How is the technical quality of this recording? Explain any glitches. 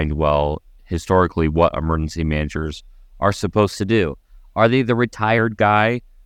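There is one clear glitch, a drift correction step from 3.76 to 5.38 s. A clock-matching stage likely changed the playback rate in one jump to rebalance its buffer, running about 6.45% fast. The speech rises about 108 cents, roughly a semitone, and hurries, then snaps back.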